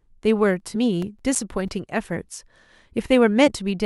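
From 0.6 to 2.01 s, CD scratch ticks: about ten short ticks, the longest a few milliseconds, recurring roughly seven times a second as unrecoverable data repeats on each disc revolution. At 0.75 s, overlapping these, and again at 3.46 to 3.48 s, compressed frames skipped: a few frames, around 70 ms of audio, drop out, consistent with 23.2 ms frames.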